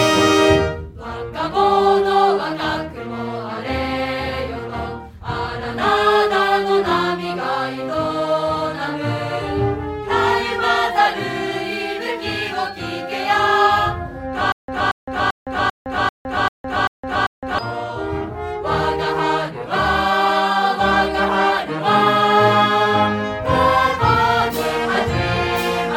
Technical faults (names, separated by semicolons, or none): stutter with silent gaps